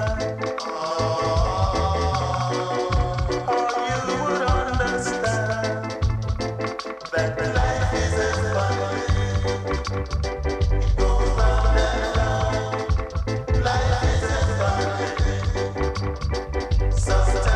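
A second capture path or an out-of-step edit has likely mixed the audio in twice, leaving a doubled audio track throughout. A full-band copy trails the original by about a third of a second, around 5 dB quieter, with no decay or room colour, so every event repeats as a flat slapback.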